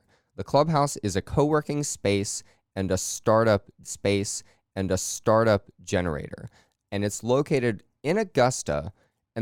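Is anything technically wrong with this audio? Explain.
Yes. At 3.83 s the player queued the same stream segment twice, so a stream segment repeated: two seconds of speech replay through 5.83 s, with a small blip at the jump back.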